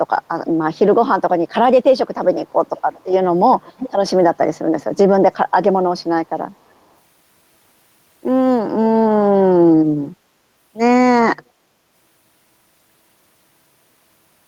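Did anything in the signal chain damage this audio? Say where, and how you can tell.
Yes, there's echo leak from the call processing. A delayed copy of the speech, trailing by 343 ms, turns up in scraps at 2.47, 3.51, 4.8, 5.33 and 6.54 s. It's mostly faint but much louder around 3.5 s. That's likely a far-end loudspeaker feeding back past an echo canceller that didn't fully remove it.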